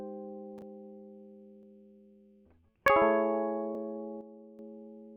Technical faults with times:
0.62 dropped buffer (overrun)
1.63 dropped buffer (overrun)
2.88 dropped buffer (overrun)
3.75 dropped buffer (overrun)
4.21-4.59 sudden gain jump

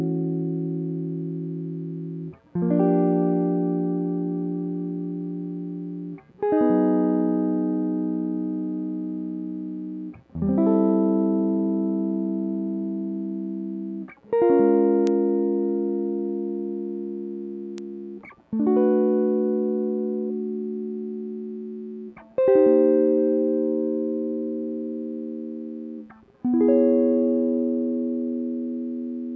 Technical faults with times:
15.07 bit error spike
17.78 bit error spike

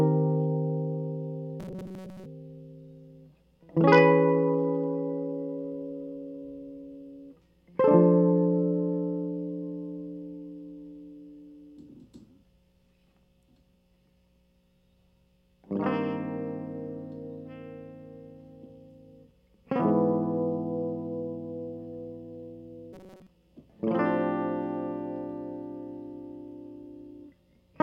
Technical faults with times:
1.60-2.26 robotic sound from repeated short buffers
22.93-23.27 robotic sound from repeated short buffers

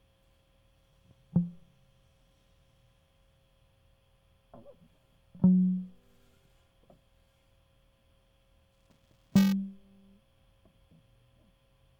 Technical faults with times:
8.72-9.52 buffer tearing

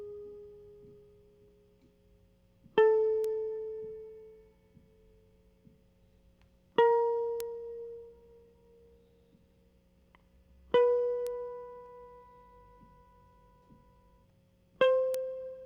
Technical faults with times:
3.24 bit error spike
7.40 bit error spike
11.27 bit error spike
15.14 bit error spike

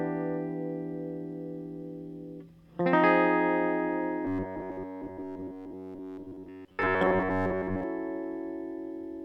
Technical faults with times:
4.25-7.83 robotic sound from repeated short buffers

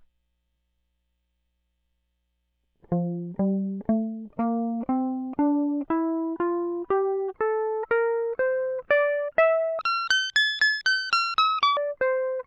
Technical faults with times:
9.79-11.77 section at the wrong speed

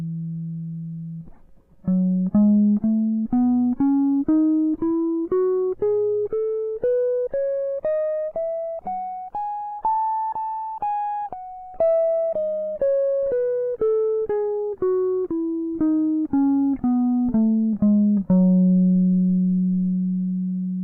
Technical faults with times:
9.67-9.96 short concealed packet loss

